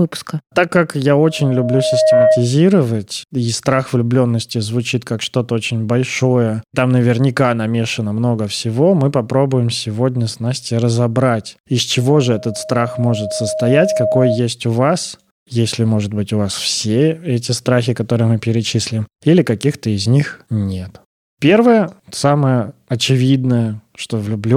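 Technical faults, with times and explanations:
1.19–2.54 s and 11.98–14.46 s, loudspeaker feedback squeal: After "как я", and again between "разобрать из" and "у вас если может", a 627 Hz tone swells over about one, then two seconds. It ends up roughly 5 dB above the speech. The microphone re-captures its own loudspeaker, so loop gain exceeds one at that frequency.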